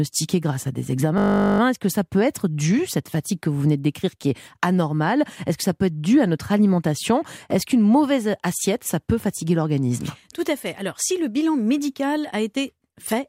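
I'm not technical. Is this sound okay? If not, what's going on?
No. From 1.18 to 1.6 s there's a system hang loop: the computer froze and replayed one 20 ms scrap, making a steady buzz rather than silence or a dropout.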